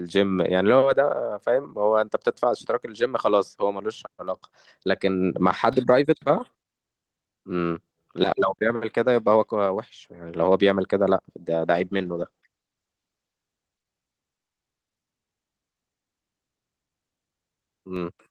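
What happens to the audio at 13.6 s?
At 13.6 s a call bitrate drop is under way, running from 11.54 to 14.17 s. The bandwidth estimate fell, so the encoder went from 32 to 16 kbps. For about 1.8 s the speech is coded more coarsely and sounds rougher. A DC step also spans this moment, from 5.73 to 17.96 s. The waveform's zero line jumps, with a low thump where it steps.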